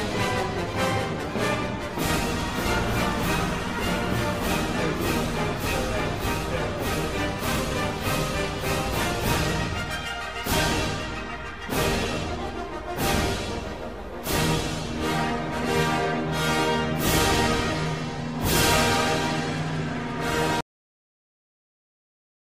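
At 20.61 s the audio has a cut-off end. The sound stops mid-stream, with no decay or fade. The final buffers were never written or played out. Digital silence follows abruptly and lasts until the file ends.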